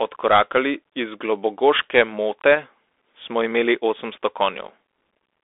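Speech heard through a Bluetooth CVSD headset codec throughout: the band runs only from about 300 Hz to 3.5 kHz, with nothing above 3.8 kHz, so a spectrogram shows a flat ceiling there. The one-bit delta coding, which fits a 64 kbit/s stream, leaves a granular hiss under the speech and scratchy, distorted s sounds.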